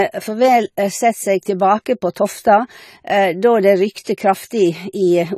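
It's a short speech clip with AAC compression damage running all the way through: nothing gets past about 14.1 kHz, and the top end sounds dull and smeared, with a fizzy, warbly edge on sibilants. That's likely a low-bitrate AAC-LC encode, something around 32 kbps.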